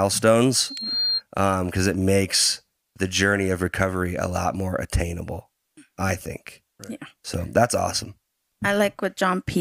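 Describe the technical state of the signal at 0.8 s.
A piercing tone near 4.2 kHz swells over roughly 0.4 s until it is about as loud as the speech, lasting from 0.56 to 1.22 s. This is loudspeaker feedback squeal: the microphone re-amplifies its own loudspeaker until that frequency runs away.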